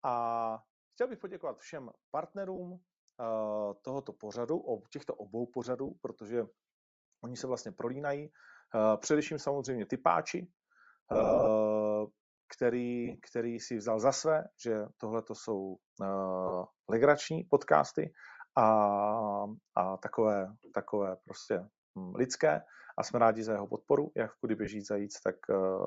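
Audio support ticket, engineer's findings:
Bluetooth LC3 compression, whole clip: breathy, grainy top end, upper band noise-filled. Likely LC3 codec, sound fits roughly 32 kbps with 7.5 ms frames, zeroing high bins and noise-filling them.

Automatic gain rising, 0.97–9.99 s: speech and background swell together by about 14 dB. AGC reading a quiet input and ramping its gain up slowly.

Lost LE Audio frames at 2.56–2.59, 5.86–5.89, 11.13–11.48, 13.06–13.15 (before "který si vzal za"), 16.47–16.52 (before "legrační podcasty"), 21.39–21.49 (after "a takové takové") and 24.65–24.68 s. Decoder repeats the last spectrum with random signs, leaving noisy smears. The 11.13 s loss is worst, 232.5 ms lost in scattered runs up to about 40 ms.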